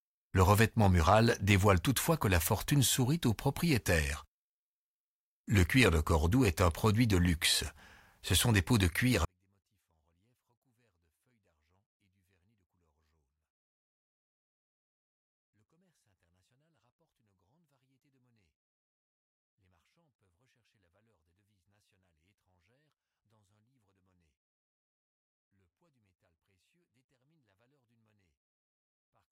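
Speech clip, and right after "des pots de cuir" at 9.25 s it collapses to near-silence and stays there to the end. That's a 24-bit alignment error (too quiet). The samples were written as 24-bit values sitting in the low bytes of a 32-bit word, then read back as full 32-bit integers. Everything lands 8 bits down, about 48 dB quieter, so the sound is still clean but barely audible.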